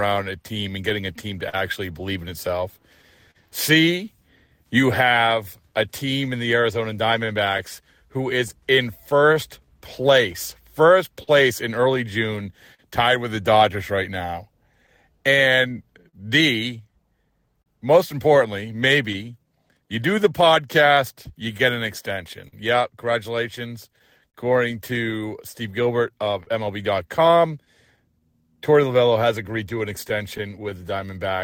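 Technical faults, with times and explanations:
Throughout, clock drift between sender and receiver: The timing feels subtly unsteady, with small hiccups recurring at uneven intervals. The sender's clock runs roughly 3% slow against the receiver's, so the jitter buffer keeps draining and the receiver must keep patching its timing.
0.24–30.64 s, repeated timing corrections: The pacing sounds slightly stretched, running at 99% speed with faint stutters. To stay in step with the slower sender, the receiver repeatedly repeats short pieces, all in the same direction, adding roughly 300 ms over the stretch.
0.89–3.37 s, scattered short gaps: Brief ticks and smears appear a handful of times, the longest around 40 ms. Isolated packets arrived late or went missing, and the receiver filled each small hole by extending the preceding sound, concealing a few percent of this span.
5.44–31.33 s, scattered short gaps: Around forty tiny hiccups and smudges are spread across this long stretch, none longer than about 40 ms. 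Individual lost or late packets were concealed by continuing the last sound, covering roughly half a second in total.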